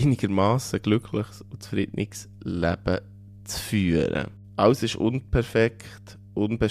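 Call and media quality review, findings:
Mains hum, steady for the whole clip: constant low tone at 50 Hz, around 25 dB below the speech. Probable ground loop or nearby transformer coupling the power line into the signal path. Spectrogram: unbroken horizontal line at 50 Hz, low harmonics above, present in pauses.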